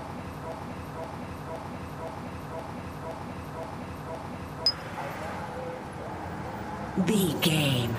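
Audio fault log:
0.00–4.66 s, broken-record loop: The clip opens with the loop already running. A fragment about 0.52 s long repeats exactly, back to back, eight times. Each pass is identical, so the sound stutters in a rigid cycle instead of moving forward. The likely cause is a player, encoder or stream that stalled and kept resending the last piece it held. Whatever should have played in those seconds is lost.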